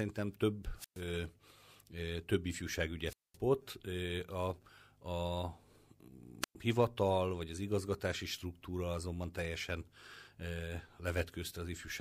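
An analogue wireless microphone's radio signal repeatedly fades until the receiver's squelch mutes the output, a wireless microphone squelch dropout at 0.76, 3.06 and 6.41 s. Each brings a brief hiss, then near-silence lasting 119, 215 and 111 ms, before speech returns; the last resumes at "hivatal vagy az igazgatási".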